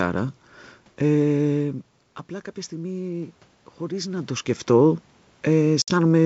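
From 2.69 s to 4.56 s the automatic gain rising can be heard. The input level fell by about 12 dB, and the gain control responded slowly, adding only about 3 dB over nearly two seconds, so the sound and the room noise swell together rather than the sound alone getting louder. On a waveform the envelope ramps up gently across that span. On a spectrogram the noise floor brightens in step with the foreground.

At 5.82 to 5.93 s comes packet loss on an ADPCM call. About 60 ms, a few packets' worth, drops out to silence with hard edges. When the signal returns, the decoder's predictor and step size no longer match the sender's, so it comes back slightly distorted before settling. A waveform shows a flat gap with abrupt edges. A spectrogram shows a blank vertical band.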